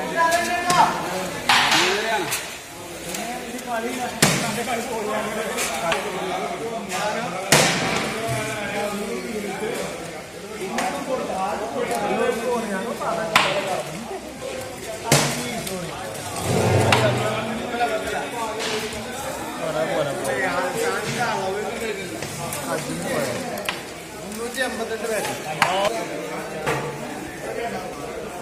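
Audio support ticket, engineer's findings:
No audible faults found.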